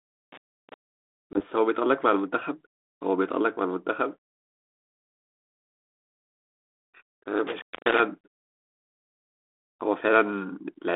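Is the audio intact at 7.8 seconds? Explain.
No. An intermittent contact runs from 7.47 to 8.00 s. A loose cable or plug opens for about 246 ms. The sound drops out with crackle at each edge, and faint hiss remains while the line is open.

Packet loss on the ADPCM call overlaps it, from 7.76 to 7.78 s. Roughly one packet, about 10 ms of audio, is replaced by silence. The decoder's predictor and step size then fall out of step with the sender's. The result is a hard-edged hole, followed by slightly distorted speech that settles within tens of milliseconds.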